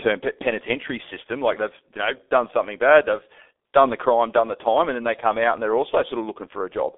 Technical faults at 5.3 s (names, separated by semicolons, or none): G.723.1 codec